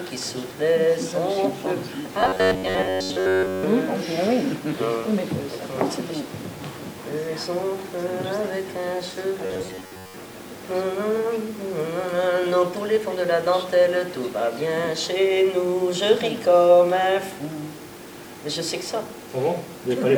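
From 2.21 to 3.63 s, the sound turns into a rigid, metallic buzz. This is robotic sound from repeated short buffers. It returns from 9.46 to 10.16 s. Both times the buzz sits near 93.8 Hz, which matches a chunk of about 10.7 ms being replayed. The likely cause is new audio arriving too seldom, so the last short chunk repeats to fill the gap. Roughly two thirds of the audio is repeated, and the real material is skipped.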